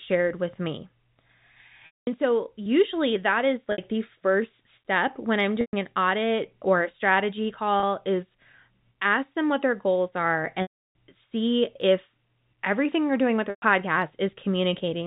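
Packet loss with pitch repetition hits at 1.86–2.07, 3.72–3.78, 5.61–5.73 (after "first step when I'm"), 7.80–7.83, 10.62–10.94 (after "what their goals are") and 13.50–13.62 s. The receiver loops the last pitch period. Short gaps sound held and buzzy, while the 210 and 330 ms gaps fade into silence. A spectrogram shows frozen, flat harmonic stripes fading out, and the waveform shows identical cycles repeating and decaying.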